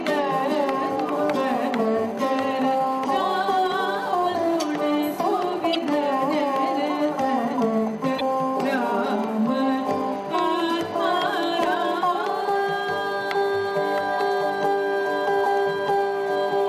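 At 5.71 s and again at 8.17 s, each lasting about 56 ms, damaged data in the compressed stream throws the decoder out of sync, producing a brief chirp, squawk, click or short hole. On a spectrogram each shows as a narrow broadband smear; the waveform shows a short, abruptly discontinuous burst.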